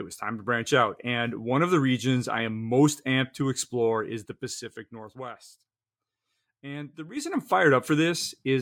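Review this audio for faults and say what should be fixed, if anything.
Zipper noise appears from 3.93 to 5.38 s, just after "amped to", as the level falls by about 15 dB in 1 dB steps, and from 7.08 to 7.42 s as it rises by about 15 dB in 3 dB steps. Both changes step about ten times a second with no smoothing. Each jump leaves a tick, seen as a staircase envelope on the waveform and vertical lines on the spectrogram. Interpolating the gain per sample, ramping it smoothly, would prevent this.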